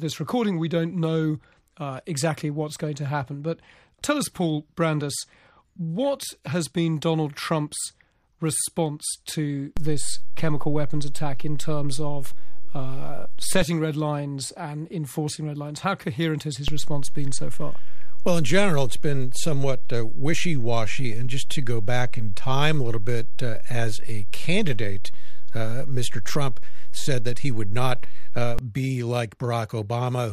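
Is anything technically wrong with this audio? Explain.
Yes. A DC step offsets the zero line from 9.77 to 13.62 s, about -16 dBFS, and from 16.68 to 28.59 s, about -14 dBFS. Each shift thumps.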